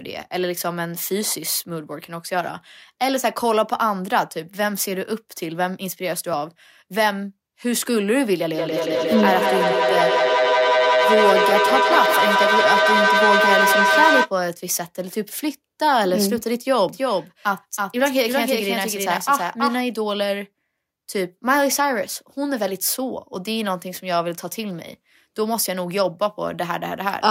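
From 8.54 to 14.34 s, feedback echo between two devices: each syllable returns about every fifth of a second, building to about 3 dB above the speech. On a spectrogram this appears as stacked, thinning repeats.

From 16.89 to 19.81 s, a doubled audio track trails roughly 300 ms behind at about 5 dB lower, likely from a second capture path. The waveform shows a full-band shadow copy that starts and stops abruptly.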